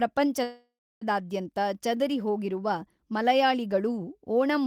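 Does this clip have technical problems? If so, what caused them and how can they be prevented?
Yes: a call audio freeze from 0.43 to 1.03 s, most likely caused by packets stalling in transit until the receiver's jitter buffer drained. With nothing new to play, the receiver stretches the last sound into a fading buzz or hiss that sinks to silence for about 300 ms. When delivery resumes, the speech picks up where it stopped, so nothing is lost but everything after arrives 580 ms late. A larger adaptive jitter buffer or a steadier, prioritised network path would prevent this.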